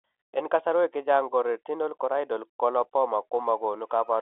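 No technical faults can be heard anywhere in this speech clip. It carries the narrow band of an ordinary telephone line, roughly 300 Hz to 3.5 kHz, which fits G.711 telephone coding at 64 kbps.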